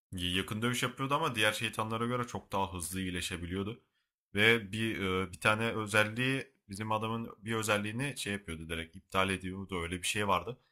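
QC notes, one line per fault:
Throughout: sample clock jitter. Timing wobbles by a few microseconds, adding hiss roughly 30 dB below the speech. It rises on loud, bright sounds and vanishes in pauses.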